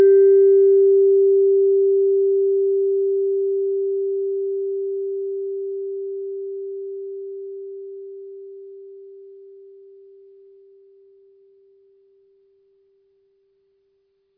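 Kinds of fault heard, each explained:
No technical faults can be heard in this music.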